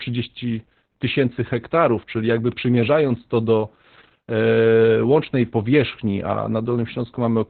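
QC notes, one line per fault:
Throughout: Opus voice compression. The speech is coded at 8 kbps in SILK mode at narrowband, with nothing above 4.4 kHz, so it sounds muffled and telephone-like. Because the excitation is coded coarsely at this rate, the damage is heavy and the sound comes out hoarse and slightly robotic.
2.52 s: bit error spike. A single corrupted sample gives one sharp, broadband tick between "tysięcy hektarów czyli jakby" and "przymierzając to do". A flipped bit makes the value jump by a power of two for that one sample and then return, unrelated to the speech.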